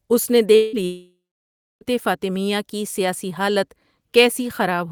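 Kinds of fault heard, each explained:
Long network dropout: the speech cuts out twice early on, at 0.55 to 0.76 s and again at 0.85 to 1.84 s, likely because packets stopped arriving over the network. In the first gap the receiver covers about 180 ms by stretching the last sound into a fading buzz. The second loses nearly a full second: the fill dies away, the last 630 ms or so is plain silence, and the speech then resumes with the missing stretch simply gone.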